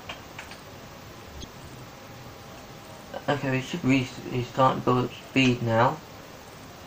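Throughout, the audio has a watery, swirly quality with dulled treble and smeared attacks, likely MP3 compression at a bitrate around 64 kbps. Damaged data in the compressed stream causes brief glitches at 1.40 to 1.44 s and at 3.80 s, where the decoder loses sync.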